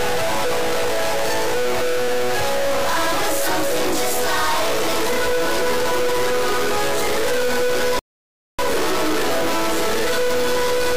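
Throughout the clip, one data bit was likely held at a fixed value by a broken line or converter, a stuck bit. Every sample where that bit should differ is pushed off by the bit's weight, so roughly half the values are wrong in a pattern that follows the waveform. The result is a constant layer of distortion riding on the sound, and because the error also flips with the sign of small values, quiet passages fill with noise instead of falling silent.

At 7.99 s the player emptied its buffer of downloaded audio and halted until fresh data arrived, a rebuffering stall. The sound drops to silence until 8.59 s, then picks up exactly where it stopped, with nothing skipped. The interruption adds about 0.6 s to the running time, heard as an abrupt gap inserted mid-flow rather than a jump or a repeat.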